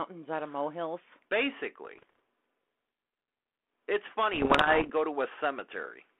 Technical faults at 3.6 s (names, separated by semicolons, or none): none